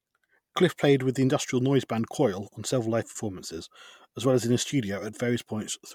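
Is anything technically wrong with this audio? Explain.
No, nothing technically wrong turns up in this speech recording, so there's nothing here to flag.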